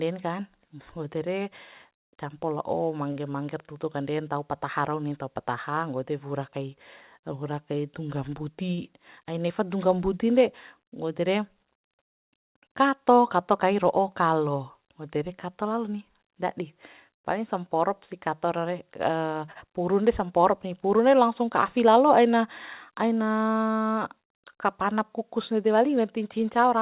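At 3.12, 8.75 and 19.52 s there is a short stall from a late packet. Sound is held for 35, 29 and 35 ms while the jitter buffer waits, then resumes. From 25.89 to 26.39 s, a jitter buffer speed-up trims repeated pitch periods, about 40 ms in total. Speech runs near 106% speed, hurried but at unchanged pitch, over a band that stops at 4 kHz.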